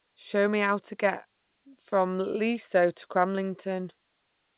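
No faults on this speech recording; the band stops at 4 kHz as expected for a call path, consistent with 64 kbps G.711 A-law telephony.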